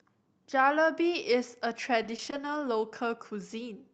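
From 2.03 to 2.84 s the speech suffers repeated packet loss. Four short gaps, none longer than 20 ms, are each patched by extending the sound just before. Around a fifth of a second is rebuilt this way, leaving choppy speech with slivers missing.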